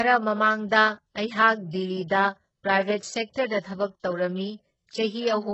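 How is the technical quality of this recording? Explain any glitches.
The recording is heavily degraded. Compression damage runs through the whole speech clip, and one attack near the middle is smeared by pre-echo.

Throughout, the treble sounds synthetic. Sibilants come across gritty and lispy, and nothing reaches above 8 kHz. This points to HE-AAC compression, likely at a very low bitrate around 8 kbps. Only the lower spectrum is truly coded, and the upper bands are patched in by copying lower content upward under a coarse envelope. On a spectrogram, the top band ends in a hard ceiling at 8 kHz, with blocky, repeated-looking texture whose harmonics don't continue cleanly from below.

From 3.60 to 3.64 s, a pre-echo precedes a sharp onset: about 45 ms of hiss before the attack, which itself sounds soft. The codec spreads quantisation noise across its whole transform block, so noise sized for the loud attack also fills the quiet moment leading into it. 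On a spectrogram this shows as a faint broadband smear just left of the onset, and in the waveform as low-level fuzz ahead of the transient.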